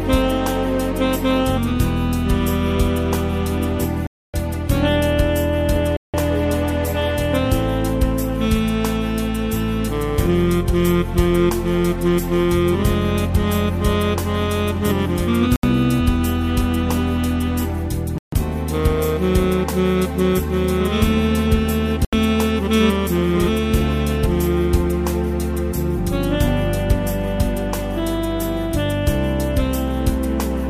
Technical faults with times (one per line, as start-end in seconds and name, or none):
4.07-4.34 Bluetooth stall
5.97-6.14 Bluetooth stall
15.56-15.63 Bluetooth stall
18.18-18.33 Bluetooth stall
22.05-22.13 Bluetooth stall